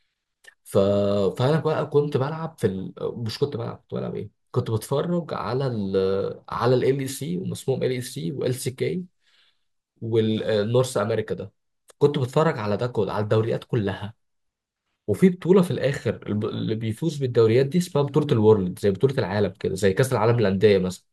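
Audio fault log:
No faults detected anywhere in this speech recording.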